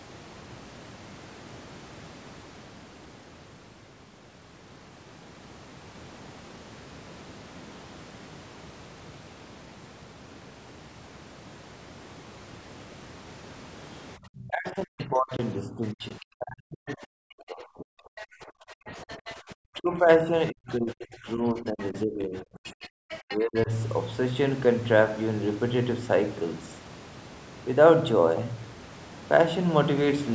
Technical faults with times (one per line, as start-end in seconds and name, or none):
14.17-23.70 speech suppressed in double talk
14.99-15.05 other side's voice leaking through
16.20-16.25 other side's voice leaking through
18.17-18.25 other side's voice leaking through
18.87-19.34 other side's voice leaking through
21.68-22.00 other side's voice leaking through
22.65-23.63 other side's voice leaking through